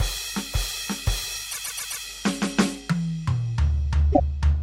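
A music recording carries steady mains hum throughout. A low tone at 50 Hz sits roughly 25 dB under the music, from a ground loop or transformer coupling the power line in. Unlike broadband hiss or buzz, it is a single steady pitch with a few low harmonics. There are also repeated frames. From 1.50 to 2.03 s, a 130.6 ms block plays four extra times, consistent with five compressed frames being resent. From 4.12 to 4.22 s, a 104.5 ms block repeats once. Each repeat stutters. Unlike a dropout, nothing goes missing: the same audio returns, and the music runs about 0.63 s longer.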